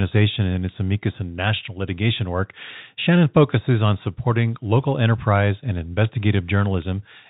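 No faults are audible anywhere in the speech; the telephone-band G.711 coding works as intended, with nothing above 4 kHz and only the faint level-following quantisation hiss the format implies.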